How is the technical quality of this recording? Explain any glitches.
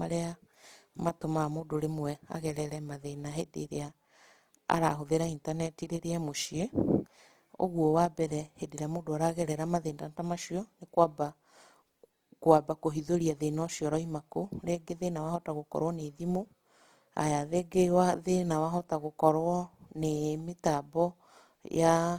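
Quality's compromised: the speech carries plainly audible coding damage from start to finish. Opus compression is the likely culprit, its music mode at a bitrate near 24 kbps, filling starved bands with noise, so tones come out rough and grainy, though bandwidth still reaches about 20.2 kHz.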